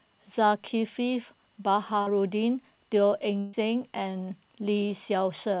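Short concealed packet loss at 2.02 to 2.11 s: about 40 ms of audio failed to reach the decoder in time, so the receiver bridged the hole by extending the preceding sound for roughly 44 ms before rejoining the real signal, leaving a brief smear in the speech.

A burst of packet loss follows at 3.39 to 3.55 s. Around 140 ms went missing in a row, and the receiver stretched the last sound across about 135 ms while fading it down. This is heard as a held, decaying tone or hiss, after which the speech picks up further along with the intervening stretch gone. Throughout the clip, nothing sounds above 4 kHz, which fits a narrowband G.711 call codec.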